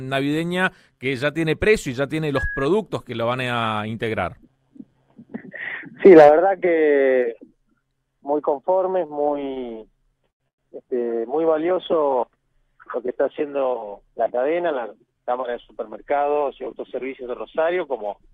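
Between 8.93 and 9.58 s the sound stutters and drags through four brief holds, the longest 33 ms: repeated stalls (stutter), as late packets kept draining the jitter buffer.

At 10.30 to 10.42 s a sound is held about 98 ms too long, a short stall from a late packet, stretched until it arrived.

From 10.48 to 10.60 s the audio drops to near silence for about 100 ms before resuming, a call audio freeze, likely from packets held up in transit.

Between 13.74 and 15.97 s everything runs hurried at unchanged pitch, 8% fast, a jitter buffer speed-up trimming roughly 0.2 s of backlog.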